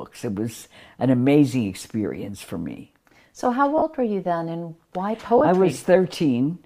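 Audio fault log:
0.58–0.62 s, 3.78–3.82 s, 5.38–5.41 s: lost LE Audio frames. Brief gaps of 40, 40 and 30 ms, just before "an amazing experience for", just before "were you then and", and right after "you then and why". The decoder, likely LC3, refills each gap from the last spectrum with scrambled phase, so the sound briefly turns into a grainy smear. On a spectrogram the harmonic lines blur into a short noise patch. The waveform shows a short noisy stretch. The lengths fit three or four 10 ms frames.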